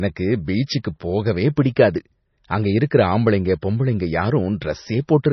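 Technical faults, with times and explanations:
Throughout, MP3 compression: the speech has nothing above 6 kHz and a heavy watery, swirling texture, with sibilants turning chirpy and metallic and consonant onsets smeared. This is likely a low-bitrate MP3, starved of bits so the encoder cut the treble and let weak frequency lines flicker on and off between frames; the damage fits a rate around 24 kbps. A simple low-pass filter would dull the top end without this warbling.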